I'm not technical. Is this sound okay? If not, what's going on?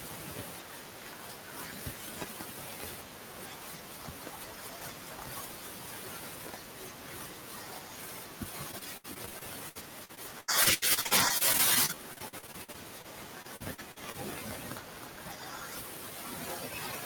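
No. The speech breaks up twice, from 8.71 to 13.06 seconds and again from 13.42 to 14.16 seconds. This is repeated packet loss, which gives a robotic sound. Small chunks of the audio went missing over and over. Each time, the last bit of sound was stretched to cover the hole. The holes are short, 80 ms at most, but they keep coming. About a fifth of each stretch is patched, so the voice sounds choppy.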